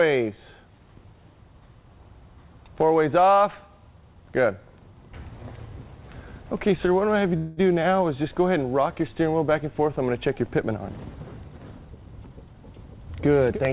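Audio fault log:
7.37–7.6 s, call audio freeze: The sound stalls for about 200 ms. The last bit of audio is stretched into a short buzzing or hissing tail that fades. The likely cause is packets held up in transit, so the jitter buffer ran dry and the receiver kept the previous sound going. When the packets arrived, playback resumed where it stopped. Nothing is lost. The pause just pushes everything after it about 200 ms later.
11.88–12.95 s, jitter buffer speed-up: For about a second the audio runs hurried, at roughly 119% speed, with no change in pitch. The buffer was holding more audio than it aims for. The receiver cut the excess by snipping out many tiny pitch-period-length pieces in quick succession, removing roughly a fifth of a second in total. Within the narrowband, telephone-like sound of the call, this squeezing is heard as a brief rush.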